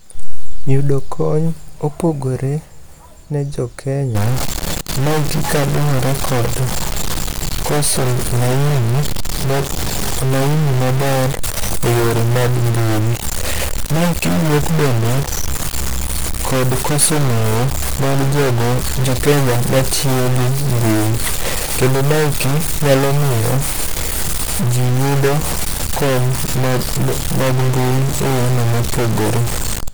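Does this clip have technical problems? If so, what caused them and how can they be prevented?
Yes. From 4.15 s to the end, pauses in the speech fill with noise. The likely cause is a stuck bit, where one data bit is held fixed and shifts about half the sample values. Unlike clipping, it persists through silences rather than only on loud peaks. Testing converter wiring and data lines with a known bit-pattern signal before recording would prevent it.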